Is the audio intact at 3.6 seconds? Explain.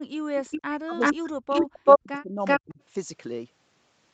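Yes, the speech at 3.6 seconds is intact, with no fault at that moment.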